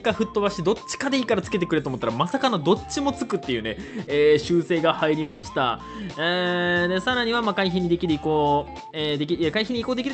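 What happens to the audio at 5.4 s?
From 5.21 to 5.45 s the last sound gets stretched into a fading buzz, likely a long network dropout. Audio then picks up again without the lost stretch.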